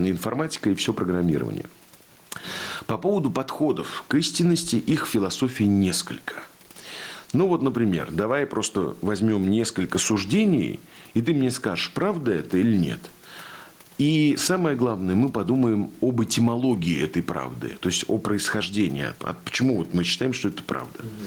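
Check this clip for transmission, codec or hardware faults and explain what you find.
One fault runs through the whole clip: gain pumping. The background noise sits about 42 dB below the speech, and the gain swings by around 10 dB. This likely comes from input gain set far too high and a fast limiter or compressor clamping down on every peak, which flattens the dynamics and gives the speech a squashed, breathing quality.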